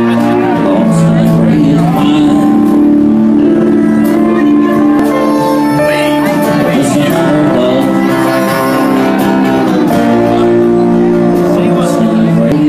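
At 4.99 s and again at 12.52 s, damaged data in the compressed stream makes the decoder misread frames and lose sync, giving a brief glitch. On a spectrogram and waveform each shows as an abrupt break at that instant.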